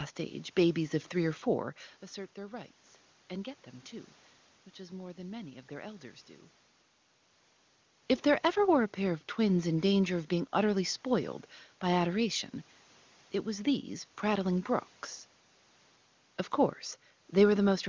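Nothing here counts as a technical fault: the level shifts near 2 s and again around 7.5 s are just the talker moving relative to the microphone, the room noise belongs to the space itself, the missing top above 8 kHz comes from ordinary call microphone processing, and the HD Voice coding at 23.85 kbit/s leaves at most a faint trace.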